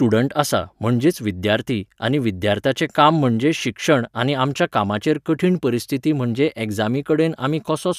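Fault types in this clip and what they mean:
Nothing to list here, as no technical faults turn up anywhere in this bit of speech.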